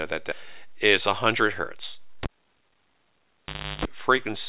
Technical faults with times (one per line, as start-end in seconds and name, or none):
0.32-0.42 skip ahead
0.93-1.64 jitter buffer speed-up
2.23-3.85 cable pulled and plugged in